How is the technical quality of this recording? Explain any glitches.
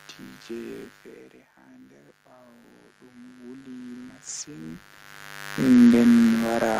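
The recording has two technical faults: a constant mains buzz and a slow swell of automatic gain in the middle of the clip.

A steady, raspy buzz sits under the speech from start to finish, only around 15 dB below it. This is mains buzz at 50 Hz. Sharp switching spikes, such as those from a dimmer, a rectifier or poor shielding, leak into the signal twice per mains cycle. They add a dense row of harmonics of 50 Hz reaching up to several kHz, which gives the hum its gritty, edgy quality rather than a smooth low tone.

From 1.12 s to 4.9 s, the speech and the room noise behind it swell together, rising by about 13 dB over almost four seconds. This is automatic gain rising. Just before it starts, around 1 s, the talker moves away, and the input falls by about 17 dB. The gain control hears the quieter input and gradually raises its gain to make up for it. Because the gain follows the level slowly, the background gets louder along with the speech.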